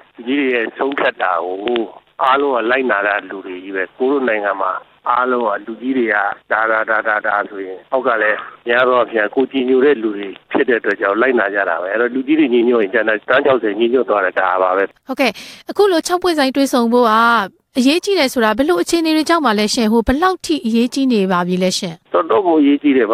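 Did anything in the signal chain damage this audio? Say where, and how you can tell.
No, no damage is audible.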